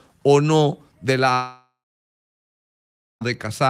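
Right after "o no del", at 1.33 s, the sound is replaced by a smeared continuation of the last moment, a buzz or hiss that fades out and leaves silence for about 1.46 s before audio resumes at 3.23 s, skipping ahead with roughly 1.9 s of material gone. This is likely a long network dropout: no packets arrived for that span, so the receiver stretched the final sound, let it decay, and then resumed without the lost stretch.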